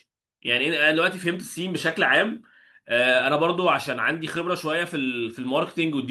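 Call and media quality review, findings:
Brief rough, grainy patches with no dropout at 1.89–1.91 s, 2.93–2.95 s (each 20 ms, fitting one lost packet) and 4.35–4.41 s (40 ms, fitting two). Lost packet rebuilt from error correction: the next packet's low-bitrate Opus in-band FEC copy was decoded in place of the missing audio.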